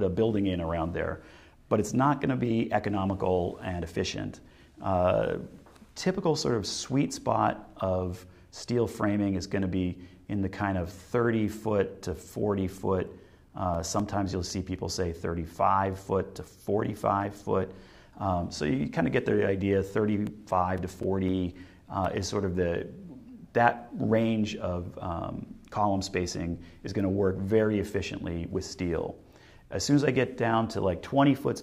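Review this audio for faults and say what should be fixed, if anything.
CD scratch ticks appear from 12.47 to 15.01 s and again from 20.27 to 22.30 s. About four ticks per second, the longest about 7 ms in the first run and 5 ms in the second, track the disc's rotation where a blemish defeats error correction. That steady rhythm separates them from random clicks. Cleaning or replacing the disc, or re-ripping it with a secure, error-checking ripper, would prevent this.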